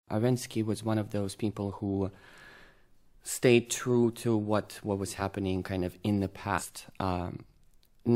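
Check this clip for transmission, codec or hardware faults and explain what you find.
Compressed frames are skipped twice. At 5.18 to 5.22 s about one frame is lost, so the audio jumps ahead by roughly 50 ms. At 6.57 to 6.62 s about three frames go, a jump of roughly 150 ms. The decoder never plays those frames, because they were missing or rejected as damaged. A frame length near 46 ms fits 2048-sample frames at 44.1 kHz. Unlike a dropout, no silence or pause fills the gap. Material vanishes, and each join is marked by a short blip or click.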